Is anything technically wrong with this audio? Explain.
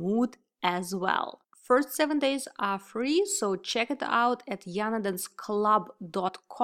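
Yes. Between 6.27 and 6.29 s there is a glitch where the audio jumps ahead. This is compressed frames skipped: about two 23.2 ms frames were never played, so roughly 50 ms of audio is lost.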